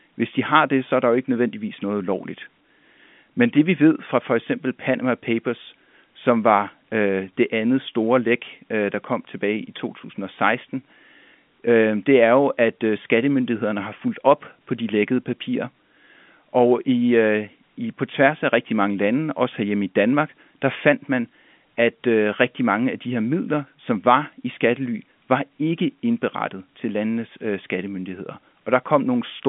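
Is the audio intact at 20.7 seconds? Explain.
Yes, the speech at 20.7 s is intact, carried cleanly through G.711 telephone coding with its usual band-limited line sound and nothing above about 3.7 kHz.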